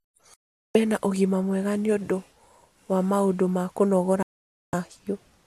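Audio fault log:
0.34–0.75 s and 4.23–4.74 s, digital broadcast dropout: the sound just cuts to silence twice, for about 0.41 s and then about 0.51 s, and picks up again mid-programme. The second hole comes right after "wa maũndũ ma kũnogora". It's a receiver losing the signal or rejecting corrupted frames and muting until clean ones arrive, so anything transmitted during those gaps is gone rather than delayed. The lengths point to a short run of consecutive bad frames each time.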